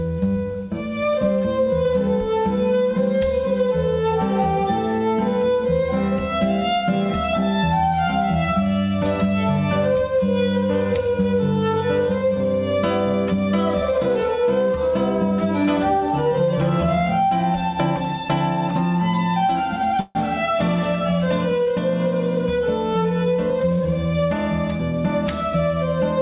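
At 20.00 s the sound does not stop but is carried on as a fading fill for about 150 ms, to 20.17 s, then resumes exactly where it left off. This is a call audio freeze, likely from packets held up in transit emptying the jitter buffer. Nothing is lost, but 150 ms of delay is added.

From 22.06 to 24.06 s the audio runs at 107% speed with unchanged pitch, which sounds hurried. This is a jitter buffer speed-up. Once the held-up packets arrived together, the buffer held more than its target, so the receiver repeatedly cut short pitch-period pieces, about 150 ms in total. Throughout, the call path passes nothing above 4 kHz, which fits G.711 mu-law coding.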